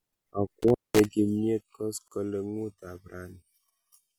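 From 0.62 to 1.06 s, an intermittent contact drops the speech for about 200 ms with crackle at the edges. The waveform collapses to faint hiss, with spikes at each break. At 2.08 s, a gap at a join of encoded pieces leaves a 35 ms gap. It appears as a clean, slightly smeared vertical blank across the spectrogram.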